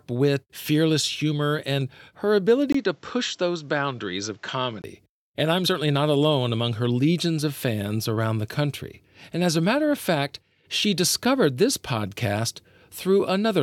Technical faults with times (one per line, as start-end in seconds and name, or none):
2.72-4.84 input switched to a poorer device